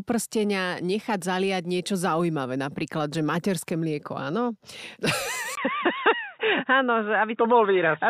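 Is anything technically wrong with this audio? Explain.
Yes. At 5.55 s the input was likely switched to a poorer device with a narrower band. After a 20 ms gap, nothing above 3.8 kHz remains, so the speech sounds dull and boxy to the end at about the same level, over a faint new background noise.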